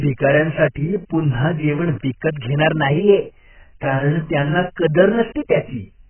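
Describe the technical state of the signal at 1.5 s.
At 1.5 s, as throughout the clip, a switching power supply is running in an audible mode, producing a switching supply whistle: a thin, high tone that wanders between about 8.89 and 9.0 kHz rather than holding one pitch, sitting roughly 30 dB below the speech. Because the supply's switching rate has dropped into the hearing range, its ripple leaks into the audio path as a steady whine over the voice.

The speech at that moment also carries heavy damage that is likely from AAC compression at a very low bitrate, on the order of 9 kbps. The encoder has thrown away all content above 3.1 kHz to save bits and quantised what remains coarsely, so the voice sounds dull, muffled and smeared, with a watery warble on sustained sounds and the crispness of sibilants largely gone.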